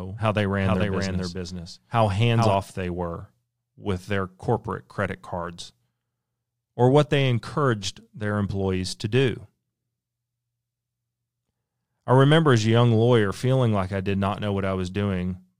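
From the very start until 2.54 s, every sound is repeated about 0.4 s later, a few decibels quieter, dry and full-band. The echo cuts off abruptly just before "they were with their". This doubled audio track is likely a second, slower capture of the same signal mixed in.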